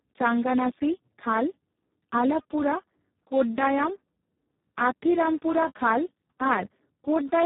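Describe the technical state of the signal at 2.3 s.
At 2.3 s the speech carries heavy Speex codec damage, present throughout the clip: too few bits for the excitation leave it hoarse, noisy and near-robotic, which points to a setting around 4 kbps. Nothing sounds above 3.8 kHz, and unlike plain band-limiting, the voicing itself is degraded.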